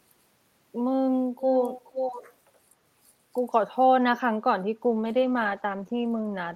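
From 1.39 to 2.31 s, a second copy of the speech trails the original by about 0.48 s, only a few decibels quieter, so the two overlap audibly. This is an echo leak. The likely cause is a far end playing the call through a loudspeaker, with its echo canceller failing to subtract what its microphone picked up, so that residue was sent back down the line.

At 4.82 s there is a call bitrate drop that lasts to the end of the clip, about 1.7 s. The speech turns coarse and watery, and the top end dulls, which fits the encoder being pushed from roughly 40 kbps down to around 13 kbps after the bandwidth estimate fell. At that rate Opus quantises more crudely and trims high frequencies, producing the muffled, rough texture heard here.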